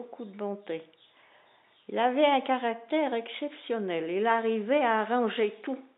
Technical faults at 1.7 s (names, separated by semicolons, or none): none